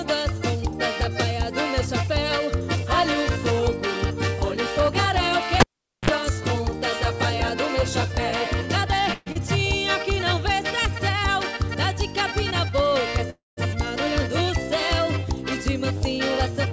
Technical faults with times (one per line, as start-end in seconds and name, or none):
5.60-6.10 cable pulled and plugged in
9.14-9.37 long network dropout
13.30-13.59 call audio freeze